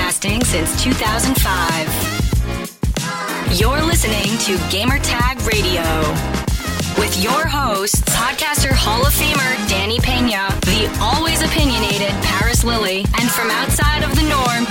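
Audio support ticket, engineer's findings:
Train of clicks from 2.95 s to 14.67 s. Regular ticking, 11.2 clicks per second, around 150 in all, peaking near signal level. Audible in pauses too. Likely interference from nearby equipment or a faulty connection or power supply injecting near-identical pulses.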